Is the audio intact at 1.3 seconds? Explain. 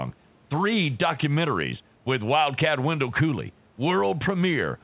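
Yes, the speech is intact at 1.3 seconds, with no fault at that moment.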